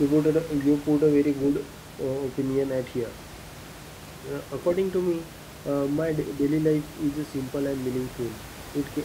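No technical faults can be heard anywhere in this speech recording. A steady layer of room noise sits in the background, about 17 dB below the speech, and it belongs to the room where the microphone was, not to the system.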